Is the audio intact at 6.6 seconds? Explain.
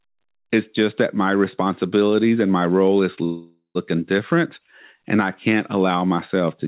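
Yes, the audio is intact at 6.6 seconds, with no dropout, glitch or distortion at that moment.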